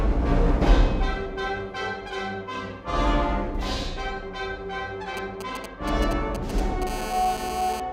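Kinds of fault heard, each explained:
GSM signalling bursts: a nearby 2G phone's short radio bursts get rectified, leaving galloping ticks and brief 217 Hz buzzes over the music, roughly 10 dB down.
GSM phone buzz: a phone in a call transmits in bursts 217 times a second, rectified into a hard, raspy 217 Hz buzz about 10 dB below the music.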